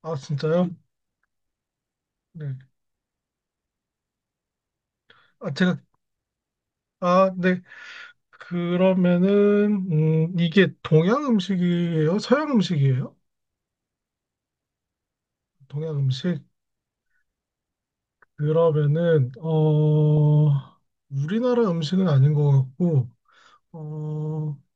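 At 20.17 s the speech is hit by DAB burbling: a brief watery blip or two where residual bit errors slipped past error correction into the MP2 data, putting short blips of noise into single sub-bands, consistent with a couple of damaged frames at a low error rate.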